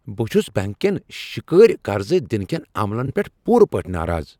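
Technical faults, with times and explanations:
3.06 to 3.11 s, frames out of order: for about 50 ms, two neighbouring chunks play back swapped, so the later bit comes first and then the earlier one. You hear a quick garbled flutter. The chunk size fits two single coded frames of roughly 21 ms each trading places, and no time is lost overall.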